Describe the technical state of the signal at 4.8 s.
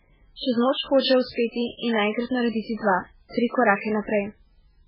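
At 4.8 s the speech carries heavy MP3 compression damage running through the whole clip. Nothing sounds above 5.3 kHz, and the sound has a watery, swirling quality. A plain low-pass filter would dull the treble without that swirl, which likely comes from an encoder starved at roughly 8 kbps toggling weak frequency lines frame to frame.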